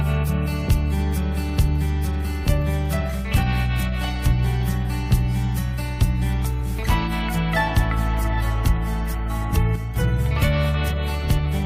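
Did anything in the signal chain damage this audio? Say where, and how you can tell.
Yes. From 9.76 s to 9.96 s, about 0.2 s, one channel drops out: the level falls abruptly by about 6 dB and recovers just as sharply, with no fade at either edge. The likely cause is an intermittent contact in the analogue wiring or a connector cutting one side of the stereo pair. Once the mono sum is taken, only the surviving channel's half of the shared material remains. That explains the halving instead of a full dropout to silence. It also rules out a gain-control dip, which would ramp smoothly and not land on such a neat 6 dB step.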